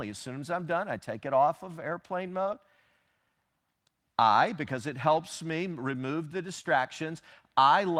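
Just after "it off of airplane", from 2.43 to 2.47 s, short concealed packet loss occurs. About 20 ms of audio arrived too late, and the receiver extended the preceding sound to cover it, leaving a brief smear. Within that same stretch, 2.45 to 2.47 s, a lost packet was rebuilt from error correction. A low-bitrate backup copy filled about 20 ms, heard as a rougher, noisier moment, consistent with a single lost packet. The pattern repeats from 6.61 to 6.65 s: a concealed loss smears the sound, then after "helps me remove the", 6.63 to 6.65 s is again rebuilt from the backup copy and sounds grainier.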